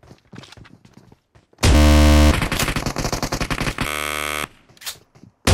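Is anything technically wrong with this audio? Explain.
Yes. From 1.75 to 2.31 s and again from 3.87 to 4.44 s the audio breaks into a rapid buzzing, machine-gun stutter, then picks up further along as though it had kept playing underneath. This is Bluetooth stutter: packets arrived late or not at all, so the receiver kept replaying its last short buffer until fresh data came. About 560 ms and 573 ms of the sound are lost in these two gaps.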